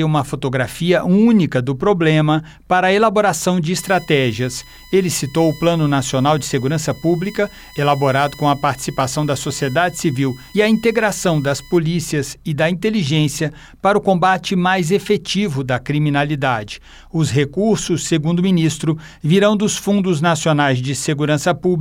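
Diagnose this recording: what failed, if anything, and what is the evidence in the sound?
Analogue wiring fault: USB whine, 3.78–11.78 s, spectrogram lines at 1 kHz, strongest at 2 kHz, about 25 dB down, from 1 ms bus frames leaking through power or ground.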